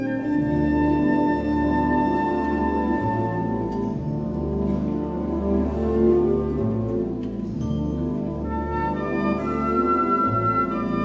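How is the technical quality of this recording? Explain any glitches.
No glitches turn up here; the audio simply carries the sound of a normal call link, with the top end stopping at about 8 kHz in a way that fits a wideband codec such as G.722.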